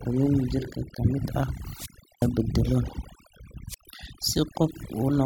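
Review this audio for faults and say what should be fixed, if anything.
Overdone noise removal runs through the whole speech clip. Bands near the estimated noise floor are pushed almost to silence, taking quiet parts of the voice with them, so the background breaks up into twinkling specks. Unlike codec artefacts, the damage tracks the noise floor. Prevent it by using gentler reduction settings.

Wireless microphone squelch dropout occurs at 1.72–2.34 s, with a hole of about 363 ms, and at 3.66–3.88 s, with one of about 110 ms. The FM signal fades, hiss rises, then squelch mutes the output. That rising static before each hole distinguishes it from an abrupt digital dropout. Prevent it with better receiver placement and line of sight.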